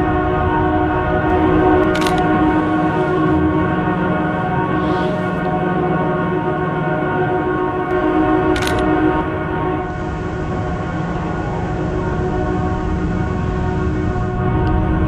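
At 9.75 s the digital radio blends to analogue: the receiver loses its digital stream and cross-fades over about a quarter of a second (257 ms) to the station's FM broadcast. The audio drops by about 3 dB, and a steady hiss rises to roughly 30 dB under the signal. The hissy FM sound lasts until 14.47 s, when the receiver blends back to the digital feed.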